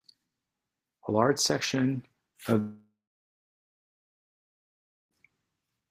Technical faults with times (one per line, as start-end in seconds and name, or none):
2.59-5.17 long network dropout